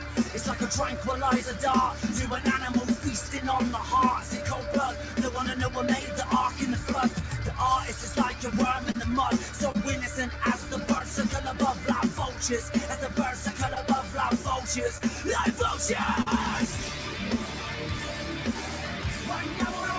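At the very start, from 0.00 to 0.17 s, the sound is cut by the noise suppressor. It misjudged the opening as background noise and pulled it down by up to about 4 dB over roughly 150 ms. The opening sits lower in level than what follows. On a waveform the first envelope sits visibly lower before jumping to its normal height. A spectrogram shows those first frames paler across the band.

Later come six short concealed packet losses: 8.92–8.96 s, 9.72–9.76 s, 10.98–11.02 s, 13.74–13.78 s, 14.98–15.02 s and 16.22–16.28 s. In the first five, about 20 ms of audio failed to arrive in time. In the last, about 40 ms failed. The decoder bridged each gap by extending the preceding sound and then crossfading back. Each gap is a brief smear or wobble, and the 16.2 s one is the longest. On a spectrogram the spectrum freezes or smooths briefly, and the waveform shows a repeated or blurred cycle. The band stops at 8 kHz, which fits wideband call processing and a G.722 codec at 64 kbps.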